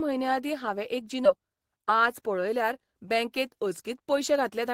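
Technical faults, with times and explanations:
1.25 to 1.27 s, skip ahead: right after "म्हयने आदीं हावें एक" the speech lurches forward with no pause or fill, the two sides butted almost directly together, so roughly a second of talk is simply absent and the phrase feels clipped mid-flow. A stretch of audio was dropped, either lost in transit or discarded by an overfull jitter buffer while later audio already sat queued, and playback jumped straight to it, cutting the delay by about a second.
1.35 to 4.68 s, jitter buffer speed-up: from just after the jump to near the end the speech runs at 108 percent of normal pace while the pitch stays put, giving a hurried delivery. The jitter buffer still held more audio than its target, so the receiver repeatedly trimmed short slices of one or a few pitch periods, shedding around 300 ms in total to bring the delay back down.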